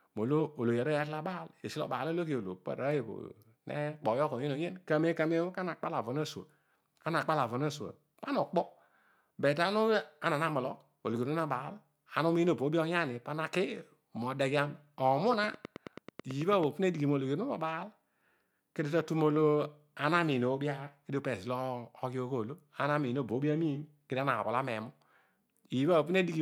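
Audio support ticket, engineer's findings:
Train of clicks, 15.33–16.64 s: regular ticking at 9.2 per second, roughly fifteen pulses, peaks about 10 dB above speech; likely outside interference or a faulty connection or power supply. Spectrogram: evenly spaced vertical broadband lines.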